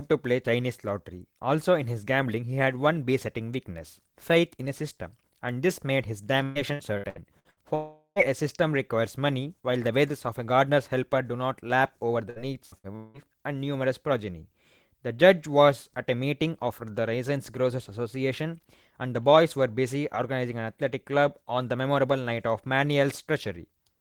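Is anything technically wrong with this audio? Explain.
Yes. From 6.43 to 7.60 s the speech turns choppy and robotic, with six short holes, the longest 119 ms, and roughly a third of the stretch smeared over. This is repeated packet loss (robotic sound): lost packets are patched by stretching the previous sound, again and again.

The same robotic chopping returns from 12.30 to 13.17 s, four gaps this time, the longest 183 ms, with about 41% of that span filled in rather than real speech.

Between 7.75 and 8.19 s the speech gives way to a fading buzz, then about 90 ms of silence, and resumes with roughly 0.4 s missing. That is likely a long network dropout, with the receiver extending the last sound until nothing remained.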